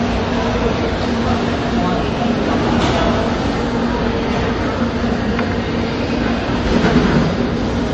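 MP3 compression damage runs through the whole clip: nothing sounds above 8.3 kHz, and the rest is plainly watery and swirly. Starved of bits, the encoder cut the treble at a fixed point and let weak components drop in and out between frames, which fits a likely 32 kbps MP3.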